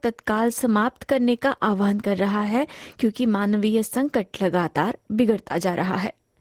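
Speech clip, Opus voice compression throughout: low-rate hybrid coding, consistent with roughly 16 kbps, quantises the excitation coarsely, leaving the speech plainly hoarse and slightly robotic.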